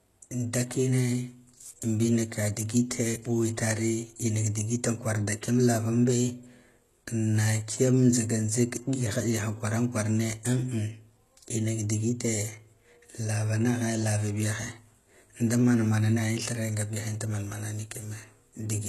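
Throughout the speech, the treble sounds bright but synthetic, with gritty, lispy s sounds and nothing above 12.3 kHz. The likely cause is HE-AAC compression, which rebuilds the upper band from copied lower bands. The plainly audible damage fits a bitrate around 16 kbps.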